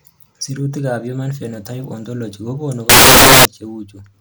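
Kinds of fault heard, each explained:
Samples built from the wrong bytes: from 2.89 to 3.45 s the speech turns into loud, harsh broadband noise. Each sample's bytes are being put together wrongly, so the rapidly changing low bits dominate the values.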